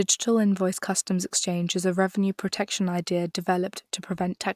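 No technical faults are audible anywhere in this speech recording.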